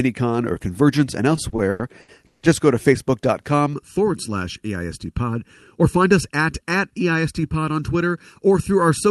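From 1.35 to 2.43 s there's a run of repeated stalls, a stutter: packets kept arriving late, the jitter buffer ran dry six times, and the receiver stretched the last sound to cover, up to 150 ms at a go. Nothing's actually lost, but the speech drags and hiccups.

Then from 3.73 s to the end, there's channel delay with comb filtering. One channel trails the other by something under a millisecond, and summing to mono cancels evenly spaced frequencies starting around 700 Hz, so the voice turns hollow and phasey.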